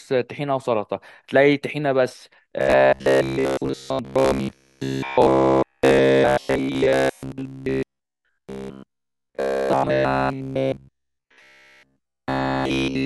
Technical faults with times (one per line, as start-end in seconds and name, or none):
2.61-13.06 robotic sound from repeated short buffers